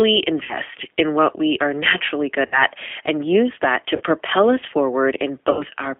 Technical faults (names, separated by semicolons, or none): G.729 codec; VoIP packet loss concealed by the speech codec